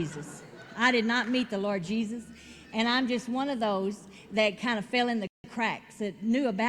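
A rebuffering stall at 5.27 to 5.44 s drops the audio to silence, then resumes unchanged, adding 0.17 s; waveform flatlines, spectrogram shows a blank vertical gap.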